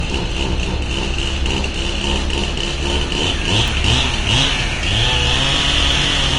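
An everyday sound recording with audible lossy damage throughout: the treble is hissy and grainy, with nothing above 10.5 kHz. This is likely Vorbis compression at a low bitrate, around 33 kbps. On a spectrogram it shows as a hard, flat ceiling at 10.5 kHz with speckled, noisy upper bands. Word clock ticks also appear from 0.32 s to 5.92 s, about seven sharp clicks of uneven strength, spaced roughly one second apart. This steady rate points to an unlocked digital link whose clocks differ by roughly 20 ppm, slipping one sample at each tick. A waveform shows each tick as an isolated spike a few samples long, and a spectrogram shows thin vertical lines through all frequencies.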